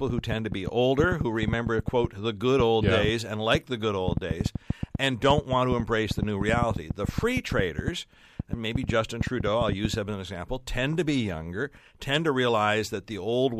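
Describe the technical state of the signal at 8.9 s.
At 8.9 s the sound sits inside a train of clicks running from 0.10 to 9.95 s, ending just before "him as an example". Uniform pulses arrive about 7 per second at an irregular pace, peaking roughly 15 dB above the speech, likely from equipment interference or a faulty connection. Unlike crackle, the clicks share one shape and tick through the pauses as well.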